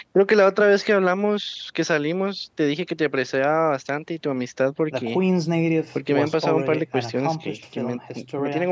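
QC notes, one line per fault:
No faults: the speech carries the ordinary mark of call microphone processing, with the lowest bass trimmed by its high-pass filter and nothing above 8 kHz, as that path normally leaves it.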